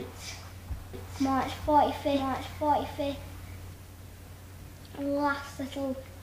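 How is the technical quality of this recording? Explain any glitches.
The recording has one clear fault, a doubled audio track, from 0.94 s to 3.74 s. Likely a second, slower capture path or a misaligned edit mixed in another copy, so the same full-band audio repeats around a second late, roughly 5 dB quieter, dry, starting and stopping abruptly.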